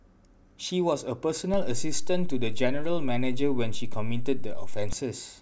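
Speech with a DC step: at 1.54 s the waveform's zero line jumps by about -22 dBFS, a low thump, and holds until 4.93 s. The waveform shows a shifted baseline, and a spectrogram shows a brief vertical streak at the step.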